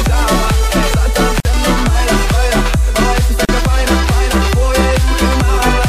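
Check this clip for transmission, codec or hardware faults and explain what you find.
Two short silences break the continuous sound, at 1.40–1.45 s (about 49 ms) and 3.45–3.49 s (about 38 ms), two seconds apart. Both are gaps at a join of encoded pieces. Separately encoded segments were butted together with their encoder start delay and final-frame padding left in. The sound resumes exactly where it stopped, which sets this apart from packet-loss dropouts that skip material. The edges are smeared by the codec.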